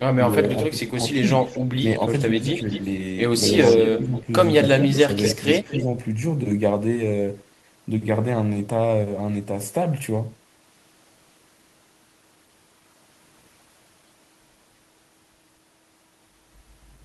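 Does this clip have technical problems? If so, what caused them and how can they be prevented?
Yes. Echo leak appears at 0.32–1.66 s, 2.48–2.81 s and 3.62–5.84 s: a delayed copy of the speech trails it by about 0.24 s. It is roughly 20 dB below the direct sound at first, rising to about 10 dB below by the last stretch. This is likely a loudspeaker on the far end whose echo canceller let part of its microphone pickup through. On a spectrogram, faint duplicate harmonic bands sit shifted about a quarter second to the right of the originals. Using a headset, or giving the canceller a properly aligned reference signal, prevents it.

Speech suppressed in double talk occurs across 0.71–2.69 s, 3.96–5.09 s and briefly at 5.83 s. During these spans, pieces of the speech dip by roughly 5 dB, and by up to about 10 dB in the middle episode, totalling nearly a second. The echo canceller likely could not tell its own talker from the loudspeaker echo and attenuated both. 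On the waveform, the envelope shows short notches where the level sags. A canceller with better double-talk detection, or less aggressive residual suppression, prevents it.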